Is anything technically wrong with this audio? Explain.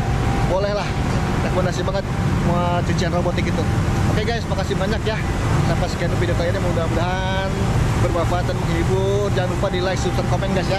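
No, nothing technically wrong is audible here.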